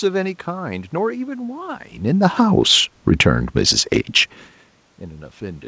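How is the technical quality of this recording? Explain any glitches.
The technical quality holds up, and there are no glitches to explain.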